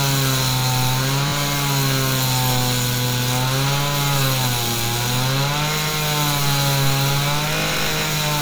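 Everyday sounds, with one repeated buffer fault: at 1.28 to 1.32 s fresh audio failed to reach the output in time, so the device replayed its last buffer twice more. A short slice, which fits a 20 ms buffer, stutters with hard joins, and a few tens of milliseconds of new sound are lost.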